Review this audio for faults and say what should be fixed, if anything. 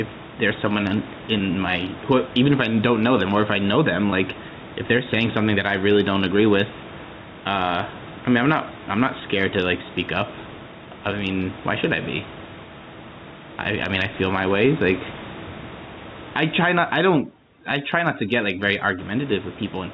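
Input gain set far too high, likely with a fast limiter clamping each loud syllable, causes gain pumping throughout: the background swells about 10 dB in pauses and ducks under the speech. Lower the microphone gain so the limiter rarely engages.

Single lost 20 ms packets at 1.38–1.40 s and 4.10–4.12 s were bridged by repeating the last pitch period, giving brief held, buzzy blips in the speech. Add jitter buffering or forward error correction to reduce these losses.

Overdone noise removal from 16.95 to 18.99 s switches whole frequency bands off near the noise floor, leaving twinkling specks in near-silence and removing quiet parts of the voice. Use milder noise reduction settings.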